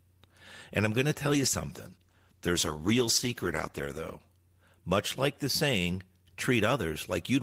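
From 1.31 to 4.25 s, a call bitrate drop makes the speech rough and muffled for about 2.9 s. The encoder coded coarsely, which fits a fall from 32 to 15 kbps.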